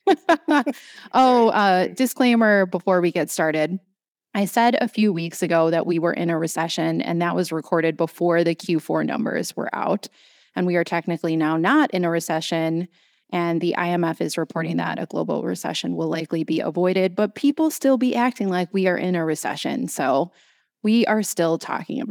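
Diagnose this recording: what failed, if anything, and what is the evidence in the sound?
Hard clipping is what failed, at the level going into the converter or a fixed-range sample format. Peaks hit the ceiling and get sliced flat, and those squared-off tops spray harmonics up the spectrum. You hear crackle from 0.11 to 0.58 s and from 1.17 to 1.67 s, just before "disclaimer before we get", both overdriven by about 3 dB. There's a briefer, milder one from 11.67 to 11.71 s, about 1 dB over, between "we are technically now" and "in a recession".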